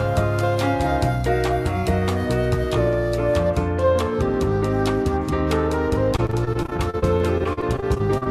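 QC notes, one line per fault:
6.16–8.27 s, repeated packet loss (robotic sound): 22 dropouts, the longest 39 ms, each patched by extending the preceding sound, so roughly a fifth of the span is concealed and it turns choppy; the spectrogram shows smeared, repeated frames and blank slivers.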